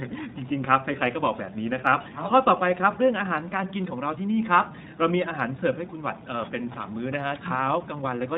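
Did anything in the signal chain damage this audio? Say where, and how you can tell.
Yes: the codec stage, throughout. Everything above 4 kHz is missing on a spectrogram, and the speech sounds plainly rough and synthetic, fitting iLBC at 15.2 kbps with 20 ms frames.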